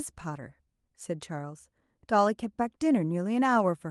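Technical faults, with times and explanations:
No technical faults detected.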